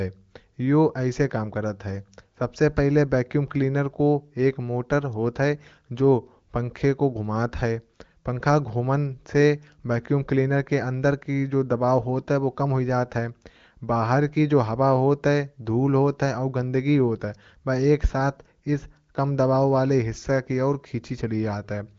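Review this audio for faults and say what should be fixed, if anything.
No faults; nothing to fix.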